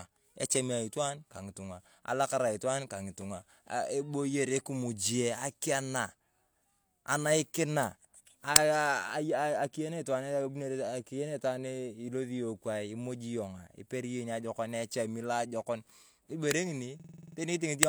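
A speech recording with a system hang loop from 17.00 to 17.37 s: the machine or driver stalled while the audio hardware kept replaying its ring buffer, so a 46.4 ms slice of sound repeats exactly eight times at 21.5 Hz, heard as a machine-gun stutter. The loop length fits a 2048-sample buffer, and around 0.4 s of the real audio is lost. Unlike a packet-loss concealment repeat, which fades or varies, each cycle here is identical.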